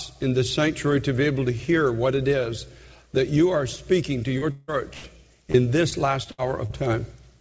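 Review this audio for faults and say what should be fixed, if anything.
A short concealed packet loss smears the sound from 4.38 to 4.43 s. About 40 ms never arrived in time. The receiver stretched the last sound for 35 ms, then blended back. It is heard as a brief wobble. A slightly deeper jitter buffer would absorb this.

From 4.51 to 4.70 s, the last sound is held as a buzz or hiss for about 160 ms, with no silence. The audio resumes further on, missing that stretch. The likely cause is a long network dropout that the receiver patched over. A steadier network link, or redundant packets, would prevent it.

A burst of packet loss hits from 4.94 to 5.06 s. Roughly 100 ms went missing in a row. The receiver continued the last sound and faded it. The audio then jumps ahead. Forward error correction would let the receiver rebuild such bursts.

Repeated packet loss gives a choppy, robotic quality from 5.52 to 6.72 s. 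There are five separate holes, the longest 70 ms. Together they total 180 ms, and about 13 percent of that span is patched sound. The fix is to find and cure the recurring loss on the network path.

The band stops at 8 kHz throughout, which fits a wideband call codec.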